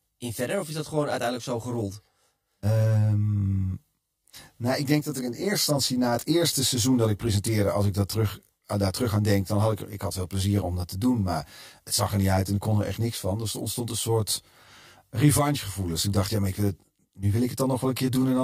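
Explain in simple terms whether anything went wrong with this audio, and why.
The speech sounds rough and slightly doubled all the way through: channel delay (comb filtering). One side runs about 20 ms late, so mixing them cancels evenly spaced pitches.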